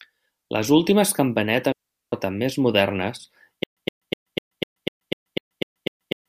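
From 1.72 to 2.12 s the speech drops into a clean hole of near silence lasting about 402 ms, ending just before "més modernes". There is no click, hiss or noise burst at either edge, only a very quick fade down and back up. This is a digital wireless dropout: the radio link lost too much data, and the receiver muted its output rather than pass on corrupted audio.

From 3.64 s to the end, shortly after "més modernes", the same 118 ms fragment plays again and again, each time followed by about 131 ms of dead digital silence. The result is a steady stutter with silent gaps that repeats every 249 ms, ten times in all. The likely cause is a stalled player or stream that replayed its last buffered fragment at each retry and then ran empty. The speech that belonged in that stretch never arrives.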